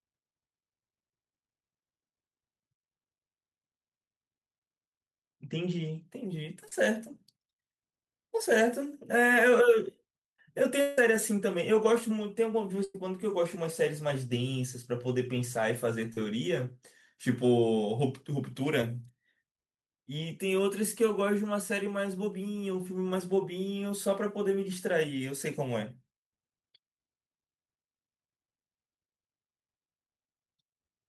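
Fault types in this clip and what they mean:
Short concealed packet loss: at 6.68–6.72 s, 16.13–16.18 s and 18.82 s, brief gaps of 10 to 30 ms were filled by extending the preceding sound, leaving short smears or wobbles.
Long network dropout: around 10.81–10.98 s, a 160 ms stretch is replaced by a continued, fading copy of the previous sound with no silence, likely from audio that never arrived.
Burst of packet loss: at 12.84–12.95 s, roughly 100 ms went missing in a row; the last sound was held and faded, then audio resumed past the gap.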